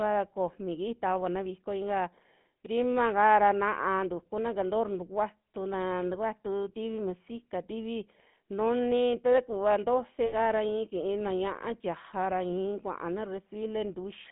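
Throughout, the speech carries GSM full-rate codec damage: plainly audible buzzy, gravelly roughness from pulse-excited vocal-tract modelling, band-limited to roughly 150 Hz–3.4 kHz, consistent with 13 kbps coding. From 10.26 to 10.34 s, lost GSM frames were concealed by repeating the last good frame, producing a brief rough, metallic ring over about 60 ms.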